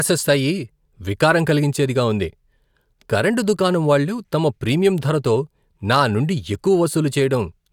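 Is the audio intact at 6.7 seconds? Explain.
Yes, the audio is intact at 6.7 seconds, with no dropout, click, distortion or other fault at that moment.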